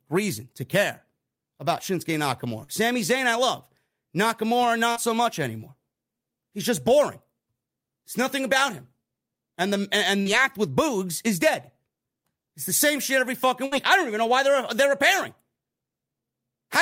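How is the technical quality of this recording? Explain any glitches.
The speech is marred by four dropouts from network packet loss: three short concealed losses and one longer burst.

Short concealed packet loss occurs at 2.63 to 2.70 s, at 4.92 to 4.98 s just before "so much anymore", and at 10.22 to 10.28 s between "the and" and "act with". Each time about 40 ms of audio failed to arrive, and the receiver patched the hole by extending the preceding sound before blending back in. The result is a quick smear or wobble, and a brief consonant may drop out. Unlike a burst, the patch is too short to turn into a held tone.

A burst of packet loss occurs at 13.66 to 13.73 s, between "same shit every fucking" and "I don't even know". About 60 ms went missing in a row, and the receiver kept sustaining and fading the last sound across the gap. It therefore lasts long enough to be heard as a brief held buzz or fading hiss rather than a smear. 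The speech then resumes with that stretch gone, which sets it apart from the shorter smears earlier.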